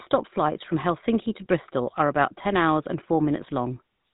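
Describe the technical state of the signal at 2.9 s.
At 2.9 s the speech is passing through the GSM full-rate codec, as it does for the whole clip. The codec reduces the voice to a vocal-tract filter fed by a coarse, regularly spaced pulse excitation, at a rate that points to about 13 kbps. It discards everything above 3.8 kHz, so the speech sounds narrow and telephone-like, and the damage is plainly audible as a buzzy, gravelly roughness in the voice.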